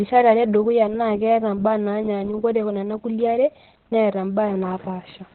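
From start to end, Opus voice compression in SILK mode narrows the speech to nothing above 4.3 kHz. It sounds muffled, hoarse and robotic, which suggests roughly 8 kbps.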